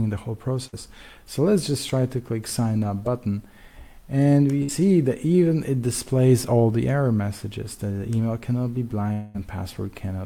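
Two bursts of packet loss interrupt the audio, at 0.67 to 0.75 s and 4.63 to 4.70 s. Each time, the receiver fills about 55 ms by stretching and fading the last sound before resuming 60 ms further on. At 9.12 to 9.36 s, a likely long network dropout leaves the sound continued as a fading buzz or hiss for about 220 ms before resuming with that stretch missing.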